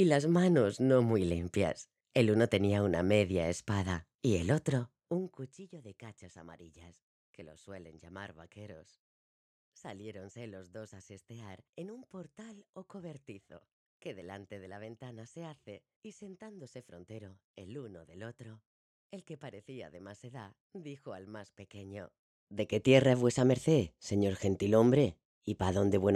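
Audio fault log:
4.86 to 5.61 s, zipper noise: the gain dropped roughly 20 dB in unsmoothed steps, around a hundred a second, each leaving a tiny click that zips across the fade.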